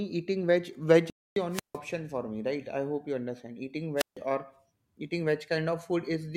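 After "eating veg veg", at 1.1 s, the speech halts and goes silent for about 0.26 s, then resumes. This is a playback stall, likely the player running short of data.

At 1.51 s comes a wireless microphone squelch dropout. The radio signal fades, hiss rises, and the receiver mutes for about 0.15 s. The voice returns at 1.78 s with "for me right I".

A second squelch dropout runs from 3.97 to 4.17 s. It has the same hiss and a mute of about 0.15 s, before "or eating".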